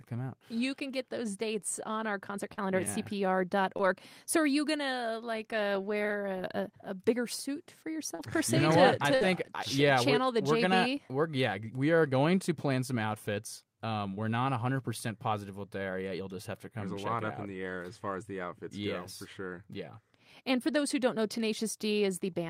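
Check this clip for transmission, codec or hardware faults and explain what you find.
The clip has packet loss in five places: four brief concealed gaps and one longer burst.

Short concealed packet loss occurs at 2.53–2.59 s after "dates on our concert", 3.77–3.81 s, 8.15–8.21 s before "per se", and 14.15–14.19 s after "plan some outfits um". Each is a quick smear or wobble where 20–40 ms of audio never arrived in time. The receiver extended the preceding sound to cover it.

A burst of packet loss at 9.15–9.23 s sounds like a held buzz or fading hiss. About 60 ms of consecutive audio was lost and replaced by a decaying continuation before the speech resumes further on.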